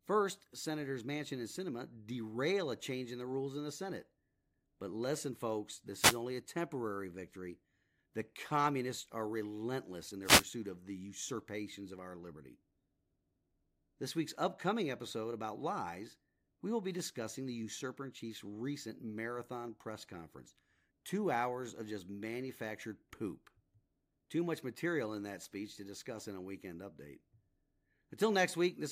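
At 5.93 to 6.22 s and again at 10.22 to 10.46 s, a wireless microphone noise hit appears as a brief swish of static over the speech. The FM radio link fades as reflected signals cancel, so receiver noise rises.

From 11.98 to 13.69 s, CD scratch ticks run as eight regular clicks, about five a second, the longest only a few milliseconds. A disc blemish defeats error correction once per revolution, and the player patches or mutes the damaged samples.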